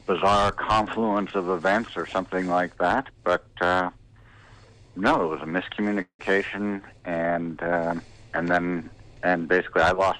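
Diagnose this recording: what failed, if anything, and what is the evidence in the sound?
Call audio freeze at 6.01 to 6.21 s: the last sound smears into a fading buzz, goes silent briefly, then resumes intact, roughly 0.18 s late. Likely a network stall draining the jitter buffer.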